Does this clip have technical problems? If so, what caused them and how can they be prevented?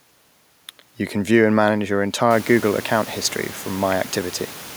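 No, the speech signal shows no technical faults; the room's own background noise rises by about 17 dB from roughly two and a half seconds in, which is part of the recording rather than a system problem, and it stays about 21 dB below the speech.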